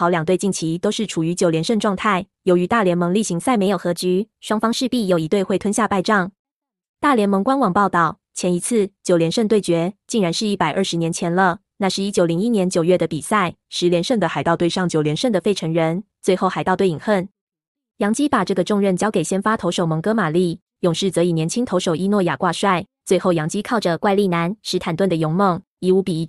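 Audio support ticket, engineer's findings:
Speech abruptly sped up or slowed and detuned about a semitone, then snapping back: 3.67–5.23 s (+5.95%, up 100 cents), 14.13–15.20 s (−5.95%, down 106 cents), 23.65–24.94 s (+5.95%, up 100 cents). Likely drift correction step: clock-sync resampler jumping rate to rebalance its buffer.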